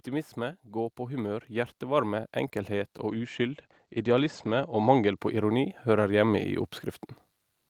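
From 0.05 s to 6.54 s, automatic gain rising lifts the level by about 11 dB. The gain control judged the input too quiet and raised it slowly. Voice and background swell together, so the room noise climbs along with the speech.

A call bitrate drop runs from 3.1 s to 5.23 s. The encoder was given far fewer bits, which fits a fall from 32 to 15 kbps. The top end narrows from 20 kHz to 8 kHz. For about 1.6 s the voice sounds muffled and rough before recovering.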